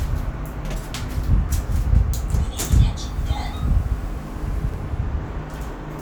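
Twice, at 0.65 s and 4.69 s, a 46 ms block was delivered one chunk late and played after its successor. Each chunks out of order fault leaves nothing missing but jumbles the sound for about 0.09 s, with three hard joins.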